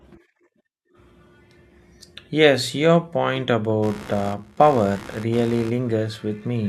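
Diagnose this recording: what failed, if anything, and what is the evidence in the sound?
From 3.82 s, after "your point", a buzz pulsing near 70 Hz runs to the end, about 20 dB down: computer activity noise, with load changes disturbing the shared analogue ground.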